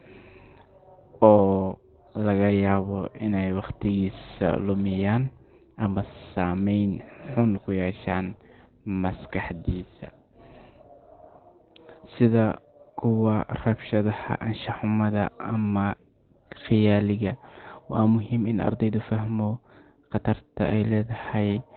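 From start to finish the speech is muffled and hoarse, with nothing above 4.3 kHz and heavy codec damage. That points to Opus compression, likely in its SILK speech mode at narrowband, which fits a bitrate near 12 kbps. Unlike MP3, Opus leaves few spectral holes. Unlike a plain low-pass filter, the remaining band itself sounds hoarse rather than merely dull.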